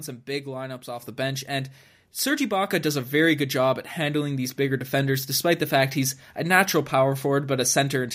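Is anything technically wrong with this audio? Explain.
Yes. At about 1.02 s, between "some big lineups off" and "the bench and", the microphone volume steps up: the input gain jumps about 6 dB at once, lifting voice and background together.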